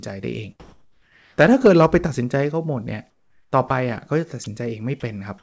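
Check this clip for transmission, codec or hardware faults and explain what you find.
Two kinds of fault turn up, both pointing to the sender's voice detector and discontinuous transmission on a call path whose content stops at 8 kHz, which fits G.722 at 64 kbps.

Comfort noise in place of the background, from 0.60 to 1.38 s and from 3.10 to 3.52 s. When the detector judged the pause to be background, the sender likely stopped transmitting and the receiver generated its own shaped noise. The real background, about 46 and 50 dB below the loudest speech, is replaced by smooth, detail-free hiss. It comes in about 2 dB louder in the first pause and about 7 dB quieter in the second, so the room tone shifts level and texture at each boundary.

Sound dropped by the voice detector, from 3.68 to 3.70 s and from 4.44 to 4.46 s. Each time, the detector briefly mistook part of the speech for background, and the sender likely stopped sending for that moment. 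About 20 ms of the speech is lost each time and filled with synthetic noise, so the speech flickers and is briefly clipped before transmission resumes.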